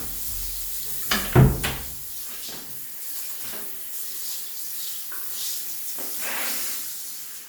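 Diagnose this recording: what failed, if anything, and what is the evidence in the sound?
Nothing in the capture, conversion, transmission or playback chain audibly fails in this recording of sounds, so no stage shows evidence of a fault.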